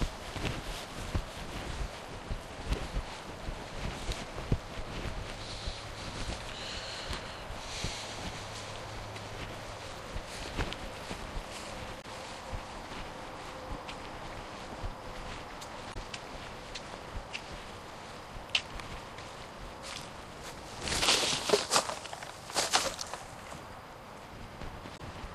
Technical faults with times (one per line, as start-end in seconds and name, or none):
11.98-12.05 damaged data in a compressed stream
15.90-15.96 damaged data in a compressed stream
24.94-25.01 damaged data in a compressed stream